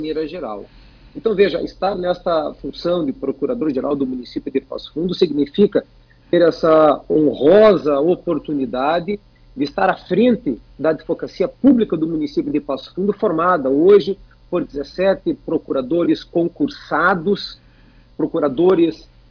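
Nothing stood out on listening; no technical problems could be heard at any point.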